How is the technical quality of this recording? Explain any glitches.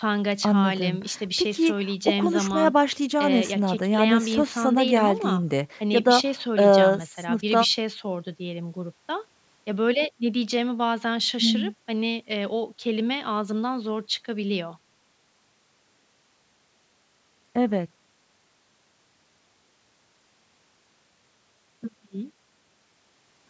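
No glitches can be heard in this speech recording. It has been through call microphone processing, which removes the lowest bass and leaves nothing above 8 kHz.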